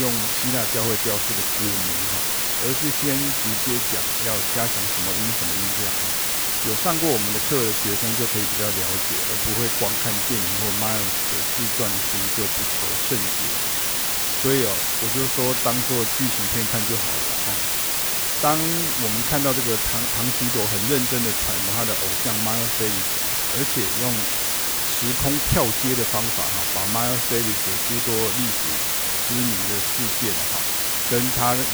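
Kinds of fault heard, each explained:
Low bit depth with dither: The speech uses only 3 bits, with dither added before rounding. The rounding error becomes a steady white hiss throughout the clip. It sits nearly as loud as the speech itself. There is no gritty distortion, only constant, even noise.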